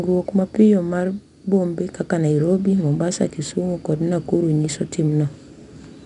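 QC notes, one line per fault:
Throughout: 4-bit ADPCM compression. A gritty hiss rides on the speech, rising and falling with its loudness, and nothing is heard above 10.7 kHz, which dulls the top end. Each sample is stored as a coarse 4-bit step from a predicted value, so the rounding error becomes broadband noise that follows the signal level. The band limit points to a sample rate near 22 kHz, which fits a stream of about 88 kbps.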